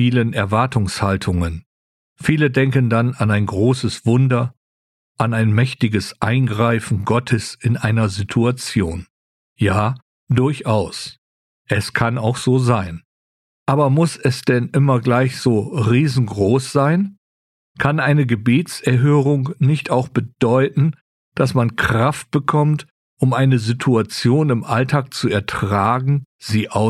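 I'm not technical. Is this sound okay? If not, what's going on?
Yes, this sound is okay, and nothing is going on with it that you need to worry about.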